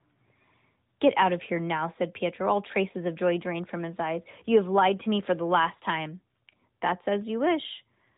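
Speech carried over the AMR narrowband mobile codec, with no technical faults to report.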